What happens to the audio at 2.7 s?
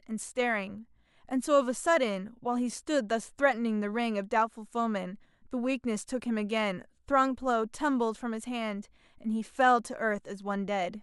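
Nothing goes wrong at 2.7 s; the speech carries on intact through that moment, with no dropout, click or distortion to be heard.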